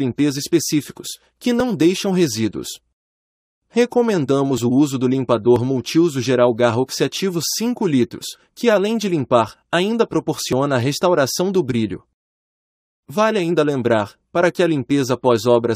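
It's a speech clip with two tiny clicks or skips at 5.56 s and 10.53 s, an overlap between stream segments where overlapping timestamps on roughly one-second segments made the player trim off a sliver of real sound.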